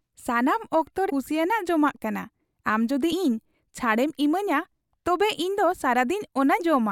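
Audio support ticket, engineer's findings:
Damaged data in compressed stream: short glitches at 1.09–1.11 s, 3.11 s and 6.59 s, each about 20 ms or less. Decoder misreads corrupted frames, loses sync, resyncs on the next header. Spectrogram shows thin broadband vertical streaks; waveform shows abrupt discontinuities.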